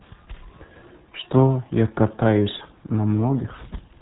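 From start to finish, the speech carries the sound of the RealAudio 14.4 codec. Nothing above about 3.9 kHz survives. The top of the band is simply gone, so the voice sounds muffled and closed in. The damage is heavy. The codec rebuilds speech from a coarse model at a very low rate, and the detail it drops comes back as a gargly, watery texture. That fits a dial-up codec running near 8 kbit/s.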